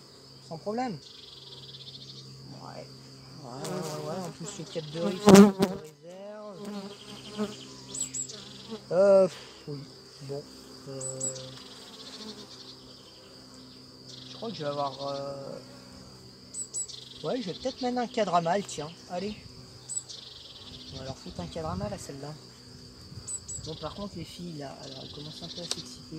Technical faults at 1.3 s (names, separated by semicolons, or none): USB whine